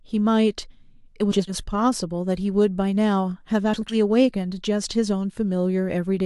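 A garbled flutter, from 1.31 to 1.54 s and from 3.74 to 3.94 s: frames out of order, with neighbouring 80 ms blocks played swapped.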